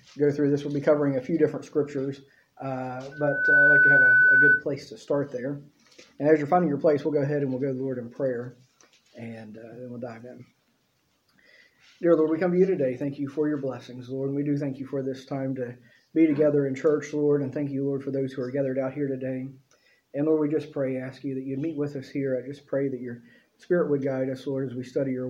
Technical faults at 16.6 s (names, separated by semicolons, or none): none